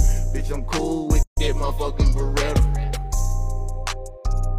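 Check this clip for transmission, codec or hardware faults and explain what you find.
One fault is present: a gap at a join of encoded pieces, from 1.23 to 1.37 s. Separately encoded pieces were joined untrimmed, so encoder start delay and last-frame padding remain, opening a 144 ms gap with smeared edges before the sound resumes where it stopped.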